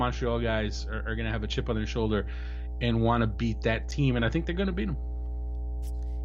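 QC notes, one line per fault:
Throughout, mains hum: a ground loop or nearby transformer couples the 60 Hz power line into the signal, leaving a steady low drone nearly as loud as the speech.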